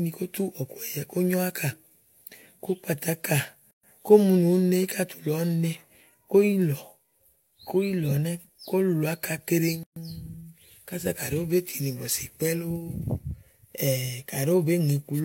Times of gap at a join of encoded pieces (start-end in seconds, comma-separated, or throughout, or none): 3.71-3.83, 9.83-9.96